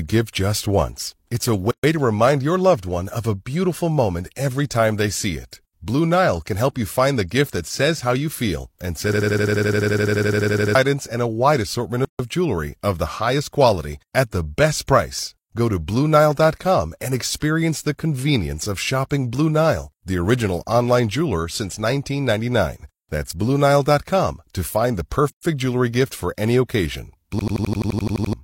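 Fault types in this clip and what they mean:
Gap at a join of encoded pieces: The speech drops into sudden silence and then resumes exactly where it stopped. This happens three times: at 1.71 s for about 126 ms, at 12.05 s for about 145 ms between "and a wide assortment" and "of jewelry of the", and at 25.30 s for about 127 ms just before "jewelry gift for any". Each hole comes from separately encoded segments being spliced without trimming, so each encoder's start-up delay and last-frame padding remain as dead air at the seam.
System hang loop: A single 85 ms slice of speech repeats rapidly, about 11.7 times a second, producing a mechanical, machine-gun stutter. The first run lasts from 9.13 to 10.75 s with 19 repeats. The second follows "gift for any occasion" and runs from 27.39 to 28.33 s with 11 repeats. The machine froze while the audio hardware kept replaying its ring buffer. The loop length fits a 4096-sample buffer, and roughly 1.5 s and 1 s of real speech are lost.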